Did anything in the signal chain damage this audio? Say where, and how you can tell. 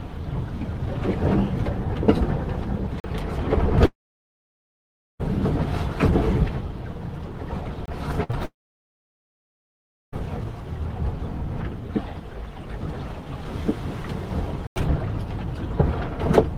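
Yes. Three blocks of digital silence cut in hard at 3.00 to 3.04 s (40 ms), 7.86 to 7.88 s (25 ms) and 14.67 to 14.76 s (92 ms), each with no fade. This points to the driver or buffer stage, where the output buffer was not refilled in time and zeros were played.

Two long network dropouts hollow out the sound from 3.85 to 5.21 s and from 8.45 to 10.20 s. A brief fading continuation gives way to about 1.3 s and 1.6 s of near-silence. The audio then resumes further on, with roughly 1.3 s and 1.7 s missing. This is likely a network outage during which nothing arrived for the receiver to play.

A burst of packet loss from 8.23 to 8.31 s leaves a held, fading continuation of the preceding sound lasting about 60 ms, and the audio picks up again with that stretch gone. The network lost consecutive packets, and the receiver concealed the gap by extending the last sound and turning it down.

Right after it, a short concealed packet loss from 8.31 to 8.35 s adds a 20 ms smear before the sound blends back. 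At the network stage, one more packet missed the decoder, which patched the hole from the preceding sound.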